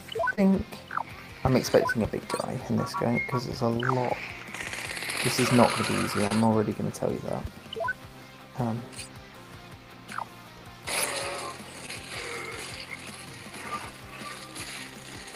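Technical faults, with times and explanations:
0.35–0.39 s, 6.27–6.32 s, 11.86–11.89 s: short concealed packet loss. Roughly 20, 40 and 20 ms went missing, were patched by extending the preceding sound, then crossfaded back, giving brief smears or wobbles.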